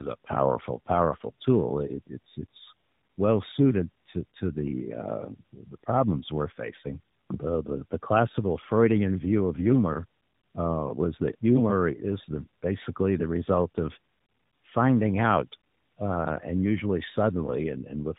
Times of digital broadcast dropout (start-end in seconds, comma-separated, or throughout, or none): none